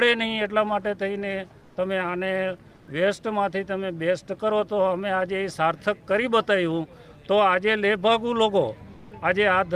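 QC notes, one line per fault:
2.75–2.87 s and 8.93–9.11 s, comfort noise in place of the background: for 120 ms, then 180 ms, the real background turns into a smooth, featureless hiss about 4 dB and about 2 dB quieter, likely from discontinuous transmission such as Opus DTX, with the receiver synthesising fill noise.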